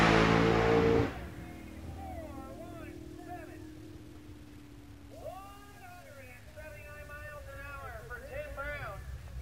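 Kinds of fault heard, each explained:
Low bit depth without dither: likely an 8-bit truncation with no dither, leaving grainy distortion about 30 dB below the signal that tracks the sound throughout.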